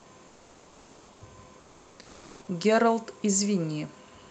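From 0.27 to 1.21 s and again from 1.59 to 2.47 s, the real background in the pauses gives way to comfort noise: a flat, featureless hiss replacing the room's textured noise floor, likely from Opus DTX halting transmission between phrases. The first stretch sits about 2 dB lower, the second at matching level, roughly 30 dB below the loud parts. On a spectrogram these gaps appear as smooth, uniform grey bands, and the waveform shows an unnaturally even low-level envelope there.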